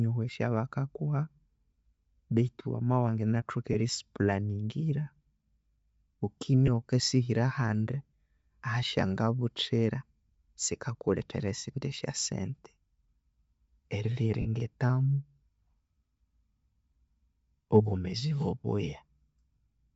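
Throughout the speech, the encoder is likely Bluetooth LC3 compression working at a low rate, which fits about 32 kbps with 10 ms frames. At that rate the transform coder discards much of the upper spectrum and fills the gap with synthetic noise. The damage is plainly audible: consonants and vowels carry a breathy, grainy edge, and the top of the band sounds thin and hissy rather than detailed.

Four short dropouts come from lost LE Audio frames, where packets never arrived and the decoder filled each gap by reusing the previous spectrum with scrambled phase. The first falls from 3.73 to 3.76 s, between "wamabya wanganathoka" and "erisi planingira". Others follow at 6.67 to 6.69 s and at 8.61 s, each roughly one 10 ms frame long, heard as a brief noisy smear. The longest, from 14.41 to 14.46 s, spans about 40 ms and leaves a longer noisy smear.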